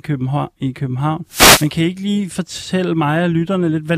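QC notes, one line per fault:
1.28–1.70 s, wireless microphone noise hit: FM radio fade lets receiver static surge before "kan I ikke lige", a broadband smear on the spectrogram.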